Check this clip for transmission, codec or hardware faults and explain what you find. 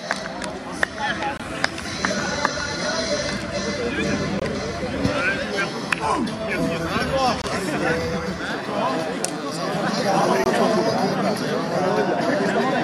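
There is one fault: a gap between chunks, at 1.38–1.40, 4.40–4.42, 7.42–7.44 and 10.44–10.46 s. The audio arrives in 3-second chunks, and each join inserts about 21 ms of silence. Each gap is a hard-edged dropout. On a waveform it appears as a flat line, and on a spectrogram as a thin vertical blank stripe.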